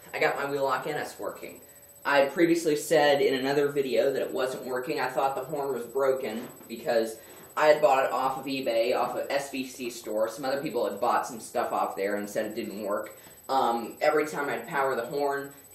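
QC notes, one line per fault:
No faults detected in this clip.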